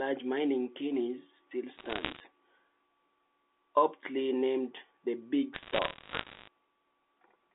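Speech coming down a G.711 phone line, band-limited to about 250 Hz to 3.6 kHz, with bit errors on the digital phone line in two stretches: 1.76 to 2.2 s, just after "mining chimneys still", and 5.54 to 6.48 s, after "aptly named the 'big". Roughly one bit in a hundred gets flipped, each flip corrupting a single sample, and the ones landing on sign or high-order bits throw the waveform sharply, so you hear quick ticks piling up into crackle laid over the speech.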